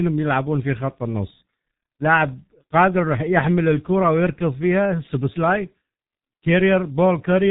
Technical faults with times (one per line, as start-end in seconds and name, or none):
0.00-7.50 G.723.1 codec